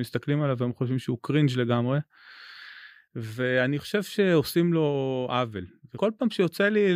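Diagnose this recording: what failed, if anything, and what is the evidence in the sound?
Damaged data in a compressed stream at 5.94 to 5.98 s: corrupt codec frames make the decoder lose sync, producing a brief blip in the speech.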